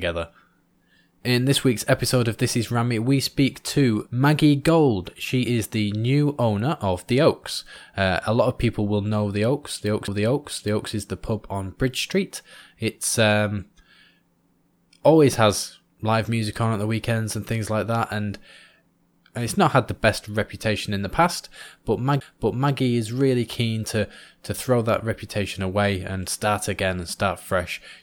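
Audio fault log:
10.07 s, CD skip: after "lot of people will" the sound drops out for roughly 5 ms with a tick, then resumes at "is the pub on". The laser jumped to another turn of the spiral, so the speech lurches to another point.
22.2 s, CD skip: after "reputation in the past", a brief mute of about 7 ms and a tick, then "is really keen to". The pickup lost its place and restarted on another disc turn, so the speech jumps.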